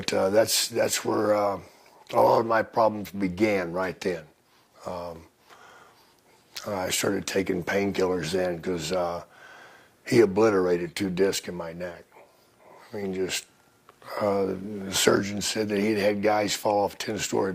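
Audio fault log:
Nothing to flag here: the audio runs along without a single problem worth logging.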